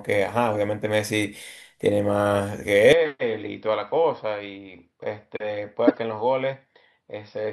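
At 2.93 s the speech abruptly turns duller and a few decibels quieter, with nothing above 5.6 kHz and a faint new noise floor, through to the end. There is no gap at the change. The likely cause is the input switched to a poorer device, whose narrower band and own noise replace the original microphone.

From 5.87 to 5.98 s there is a harsh burst of misplaced energy. This is a corrupt frame decoded: damaged bits in a handful of consecutive compressed frames were played anyway, so wrong gains and codes spray energy across the wrong frequencies for roughly 100 ms.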